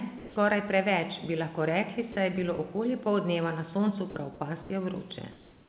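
At 0.18 to 0.36 s, just before "preveč bi lahko rekli", speech gives way to flat hiss for 180 ms, with about 70 ms of the sound missing. This is sound dropped by the voice detector, likely because it mistook quiet speech for background. The same gap recurs at 2.12 to 2.16 s, between "preveč bi lahko rekli" and "je bilo okoli", and again at 4.10 to 4.16 s, where all 60 ms of speech is lost. What sets this apart is that syllables disappear, not just the background.

At 4.62 to 4.70 s and from 5.32 s to the end, the pause background turns smooth and featureless. This is comfort noise in place of the background, likely from discontinuous transmission. No speech is lost, only room texture. The level shifts by about 2 dB, slightly louder in the first stretch and slightly quieter in the second.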